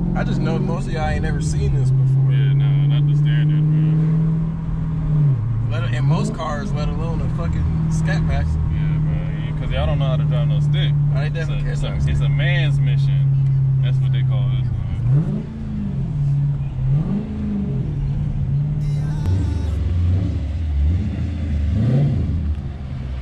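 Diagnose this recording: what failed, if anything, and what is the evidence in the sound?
Nothing failed here; no stage shows any fault.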